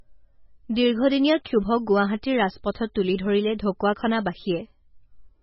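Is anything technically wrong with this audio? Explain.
Yes. Throughout, the speech shows MP3 compression damage, likely from a low-bitrate encode around 16 kbps. Starved of bits, the encoder cut everything above about 5.6 kHz and dropped weak frequency lines frame by frame, leaving a dull, watery, swirling sound with metallic chirps on s sounds.

At 1.44 s there is pre-echo: quantisation noise spread across the transform block leaks about 12 ms ahead of a sharp attack, so a brief hiss precedes it and the onset sounds soft and smeared.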